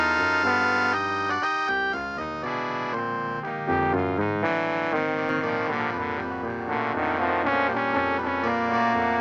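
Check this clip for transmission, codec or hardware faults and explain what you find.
One fault is present: a doubled audio track from 5.29 s to the end. A second capture path, likely running slower than the main one, mixes a duplicate of the signal back in roughly 300 ms late and about 5 dB quieter. The copy is full-band with no decay or room colour, so it sounds like a flat, distinct repeat trailing every event, not reverberation. It cuts in abruptly at 5.29 s and continues until the clip ends.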